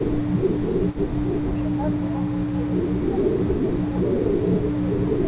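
From the first moment to the last, a faint delayed copy of the speech runs underneath. It trails by 185 ms, roughly 25 dB below the main speech. This is an echo leak. A loudspeaker at one end likely fed its microphone, and the echo canceller let part of it through.

Speech suppressed in double talk appears at 1.58–1.81 s, 2.16–2.45 s, 2.76–3.15 s, 3.47–3.68 s, 4.02–4.12 s and 4.49–5.15 s. The speech dips in short pieces, by around 10 dB. The drop is smaller at 3.47 s and deepest in the final stretch. The canceller likely confused the talker with echo and turned both down.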